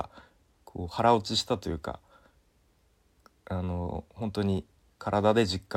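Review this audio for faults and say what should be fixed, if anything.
Sharp ticks recur about every half second from 0.14 s to 5.68 s, around ten in all. These are word clock ticks: the receiving device runs on its own clock, roughly 40 ppm off the sender's, and drops or repeats one sample at each slip. Lock the receiver to the sender's word clock.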